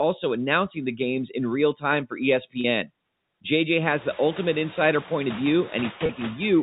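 A speech clip over a G.711 telephone path, with a steady background that pumps: between phrases it drops away, and under the speech it comes back. These are noise suppressor artifacts. The suppressor judges, frame by frame, which frequency bands hold steady noise and pulls them down, here by about 20 dB, so the noise floor keeps switching with the speech. The effect is easiest to hear after roughly 4 s, where the room noise rises by about 21 dB to sit about 17 dB under the speech. At 2.61 s and again at 6.06 s, the sound briefly sticks on a held, buzzy tone for about 30 ms before normal speech resumes. That is packet loss with pitch repetition: a gap, consistent with a single lost packet each time, was filled by repeating the last pitch period rather than leaving silence.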